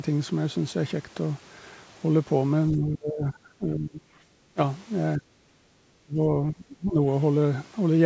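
An echo canceller likely confused the talker with loudspeaker echo during double talk and turned both down: speech suppressed in double talk at 2.71–4.19 s, 4.54–4.58 s, 5.17–5.30 s, 5.46–5.57 s and 6.03–7.00 s. The voice sinks by roughly 15 to 30 dB or breaks off in pieces.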